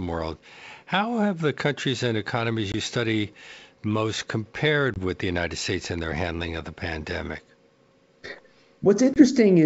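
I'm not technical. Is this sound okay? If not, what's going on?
No. This is packet loss on an ADPCM call. Small chunks of speech, about 20 ms each, drop to silence at 2.72 s (after "the countries and economies"), 4.94 s (before "with the") and 9.14 s. The speech then returns briefly rough or clicky.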